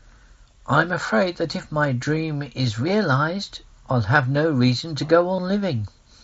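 A speech clip carrying two brief episodes of concealed Bluetooth headset packet loss, at 1.33 s and from 5.36 to 5.38 s. In each, roughly 15 ms and then 22.5 ms of signal never arrived, and the receiver filled the gap by repeating the best-matching recent stretch of waveform. That leaves a short buzzy sameness and a faint warble as live audio resumes. The gap lengths fit two and three lost 7.5 ms mSBC packets, heard through that codec's light grain and 8 kHz band limit.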